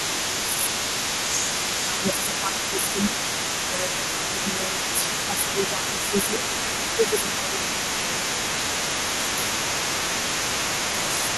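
A speech recording with a second, quieter voice present from start to finish, roughly 10 dB below the main talker. This is the other side's voice leaking through, likely because the talker's device plays the far end on a loudspeaker and its echo canceller leaves residual echo in the microphone signal. The main voice also shows speech suppressed in double talk at 0.07–3.2 s, 3.98–6.34 s, 6.96–8.1 s, 9.1–10.11 s and 10.77–11.29 s. In each span it dips in pieces while both voices overlap, by around 5 dB and by closer to 10 dB in the last span. This points to the canceller attenuating both signals when it cannot separate the talker from the echo.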